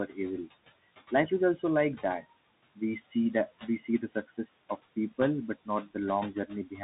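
From the start, noise suppressor artifacts run through the whole speech clip. The suppressor pulls steady noise down by about 17 dB, frame by frame. The room noise, about 16 dB below the speech, sinks in the gaps and swells under the words.

The Bluetooth CVSD headset codec is also present throughout. Nothing above 3.8 kHz survives, so the sound is narrow and muffled. The one-bit delta coding cannot keep up with loud, bright sounds. S sounds turn scratchy, and a granular hiss sits under everything. The sound fits 64 kbps CVSD.

From 3.79 to 4.62 s, there is speech cut by the noise suppressor. It mistakes parts of the speech for noise and turns them down, by about 12 dB at the deepest. Roughly 300 ms of speech sounds swallowed and faint.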